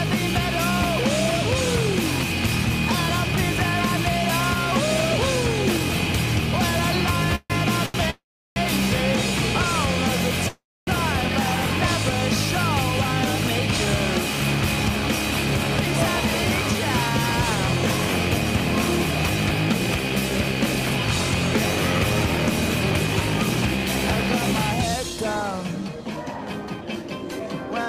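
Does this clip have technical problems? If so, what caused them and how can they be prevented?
Yes. There are call audio freezes at 7.35–7.52 s, 8.10–8.58 s and 10.48–10.89 s. In each, the last sound trails off into a fading buzz and then near-silence before resuming where it stopped. This is likely packets held up in transit draining the jitter buffer. A steadier network path or a deeper jitter buffer would prevent it.

A short stall from a late packet at 7.86–7.96 s holds one sound about 83 ms too long until the missing packet arrives. A slightly larger jitter buffer target would cover that.

A jitter buffer speed-up runs from 24.96 to 27.47 s. The receiver trims tiny pitch-period slices to shed about a third of a second of backlog, so the sound plays about 12% fast and hurried at the same pitch. Smoother packet delivery without bursts would avoid this catch-up.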